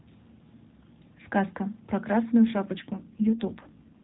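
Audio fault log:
2.42 to 4.04 s, AMR rate drop: From 2.42 s to the end, the speech turns rougher and more synthetic, with a buzzier texture. The network has pushed the encoder down its rate ladder, which fits a step from 12.2 to 5.9 kbps, leaving fewer pulses per subframe to model the excitation. The narrowband AMR channel still tops out at 4 kHz. Unlike a codec switch or packet loss, the band stays the same and there is no gap.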